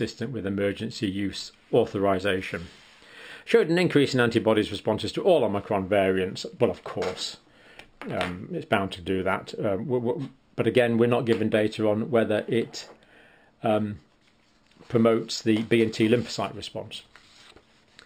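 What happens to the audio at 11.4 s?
At 11.4 s you're hearing the imaging from linear upsampling that runs through the whole clip. Going from 12 kHz up to 44.1 kHz by joining samples with straight lines dulls the top end and leaves a mirrored copy between 6 and 12 kHz, roughly 30 dB down, so the highs carry a faint metallic shimmer.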